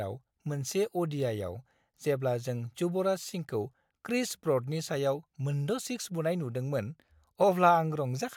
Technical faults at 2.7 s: none

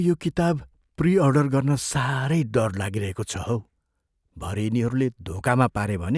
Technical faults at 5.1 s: none

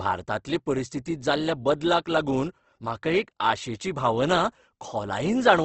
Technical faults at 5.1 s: Opus compression

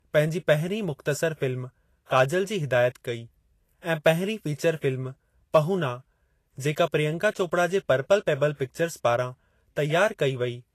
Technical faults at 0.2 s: low-bitrate audio saved at a high bitrate

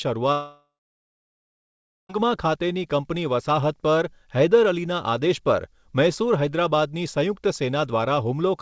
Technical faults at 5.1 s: none

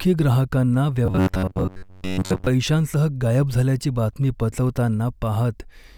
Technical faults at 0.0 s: none

